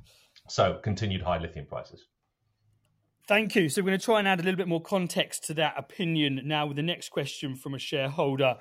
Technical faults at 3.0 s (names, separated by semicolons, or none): none